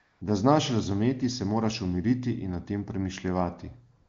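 From 0.01 to 0.21 s and again from 3.97 s to the end at 4.09 s, the phone treated the talker as silent and stopped sending speech frames, so AMR comfort noise takes over: the real background gives way to a smooth, steady synthetic hiss that switches in and out.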